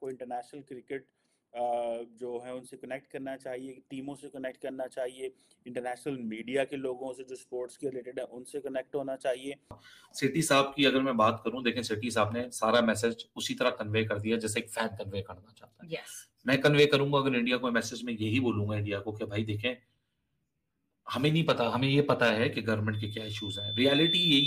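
From 22.93 s to the end at 24.46 s, loudspeaker feedback squeal: a 3.5 kHz tone swells over roughly a second and a half, ending a few dB above the programme.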